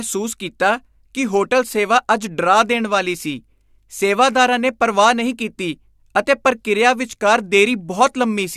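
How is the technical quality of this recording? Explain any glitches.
No audible glitches or faults.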